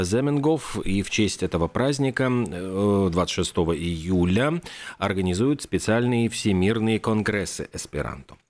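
Speech recording, with no technical faults to report. There is nothing here that needs a time or a cause.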